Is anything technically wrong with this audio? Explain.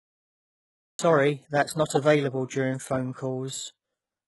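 Yes, there are two faults: a cut-off start and damage from HE-AAC compression.

The cut-off start runs from 0.0 to 0.99 s. That first second is digital silence, and at 0.99 s the speech appears abruptly, already mid-sound, just before "that's not available". There is no natural attack or fade-in. The recording or stream began late, so the onset of that sound was never captured and the audio jumps from nothing straight into it.

The compression damage is heavy and lasts through the whole clip. Nothing is present above 11.5 kHz, and the treble below that limit sounds synthetic. S sounds come out gritty and lispy, with a metallic edge. This is likely HE-AAC at a very low bitrate, around 12 kbps. At that rate the codec encodes only the lower spectrum and rebuilds the highs by copying lower bands upward under a coarse envelope, so the upper harmonics do not line up with the real ones.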